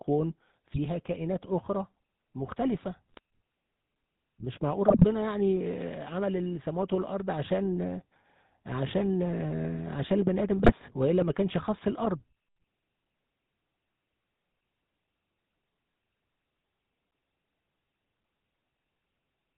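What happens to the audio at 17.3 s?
At 17.3 s, as across the whole clip, the speech carries GSM full-rate codec damage: pulse-driven vocal-tract coding cuts everything above 4 kHz, leaving a buzzy, gravelly roughness that plain band-limiting lacks.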